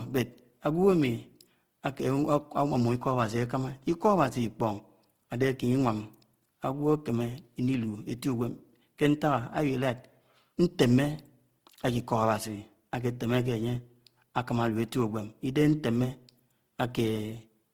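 Throughout, likely Opus compression at a starved rate, fitting about 16 kbps, filled bands with noise, so the speech sounds plainly grainy and rough up to 20.2 kHz.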